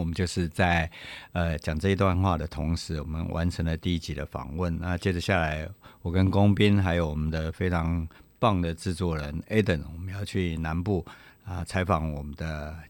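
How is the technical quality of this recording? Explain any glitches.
The recording carries a USB whine for its whole length: a fixed-pitch tone at 8 kHz, strongest at its 16 kHz harmonic, sitting around 35 dB below the speech. The bus's 125-microsecond microframe current draw leaks through power or ground, producing a thin, steady high whistle.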